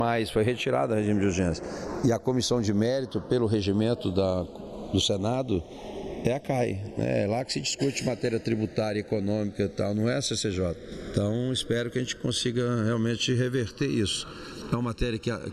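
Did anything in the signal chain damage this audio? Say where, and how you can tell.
Yes. Channels drifting apart, at the converter stage: the two channels were clocked by separate devices. The clip shows a slow, steadily sweeping flange, reaching roughly 0.7 ms of offset by the end. A fixed delay would give static comb notches, and a flanger effect would cycle back and forth.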